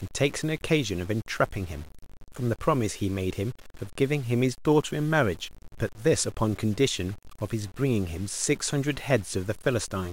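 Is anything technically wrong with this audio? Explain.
Yes. Throughout the speech there is a grainy, rasping distortion that tracks the voice, roughening quiet syllables and sputtering as sounds fade. This is likely low bit depth without dither: truncation to about 7 bits leaves signal-following error roughly 25 dB below the speech.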